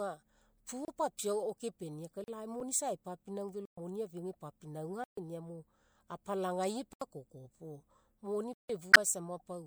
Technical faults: block of digital silence; damaged data in a compressed stream

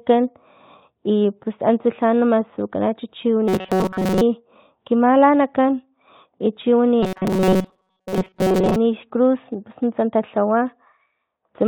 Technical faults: robotic sound from repeated short buffers

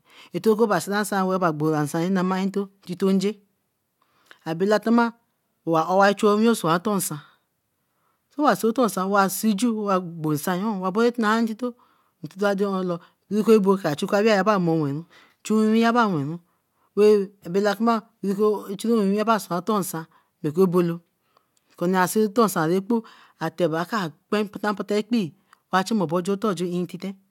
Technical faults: none

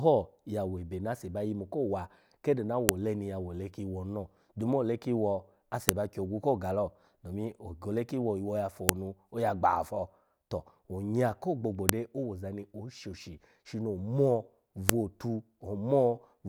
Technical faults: file header played as audio

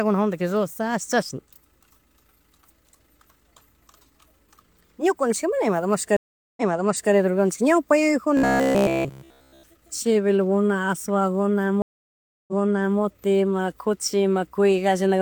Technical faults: stream reconnect; robotic sound from repeated short buffers

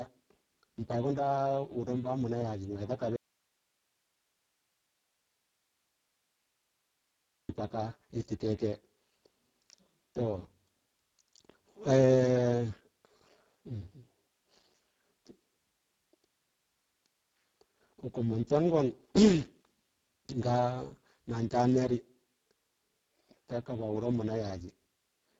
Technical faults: Speex codec; audio dropout to a faint residue

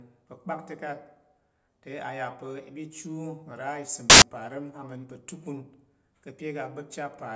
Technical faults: file tags played as audio

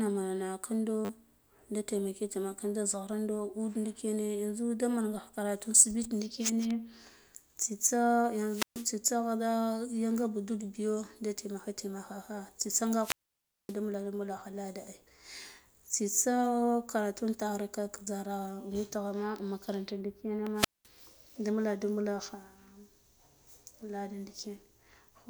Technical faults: repeated buffer; wireless microphone squelch dropout

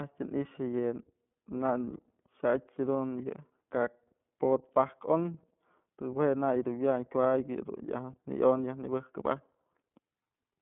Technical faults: iLBC codec

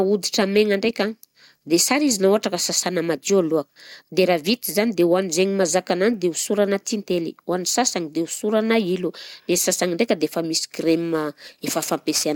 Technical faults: crude rate conversion

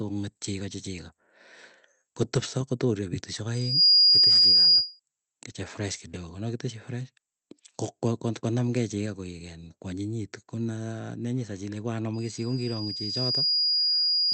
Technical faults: loudspeaker feedback squeal

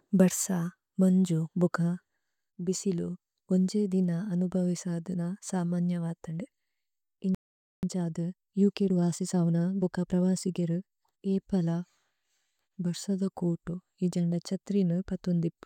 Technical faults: playback stall; time-compressed catch-up

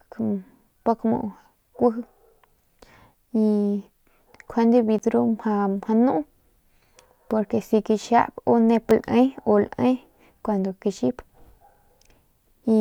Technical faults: block of digital silence

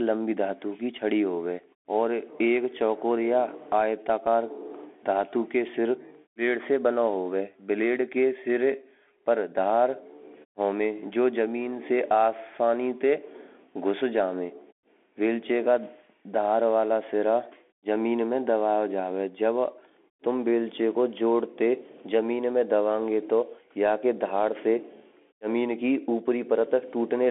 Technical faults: Bluetooth CVSD headset codec

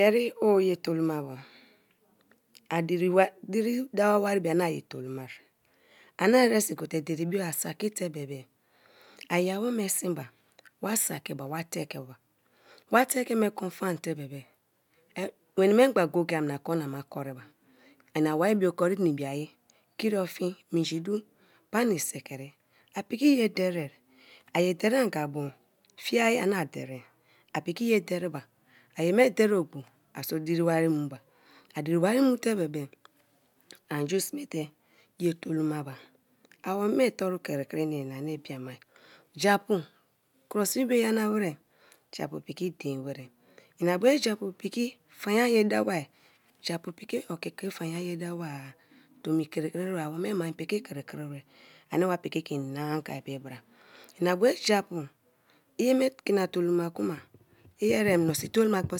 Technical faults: none

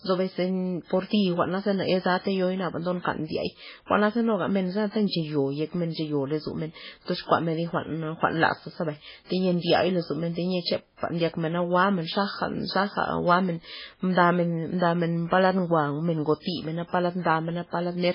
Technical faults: MP3 compression

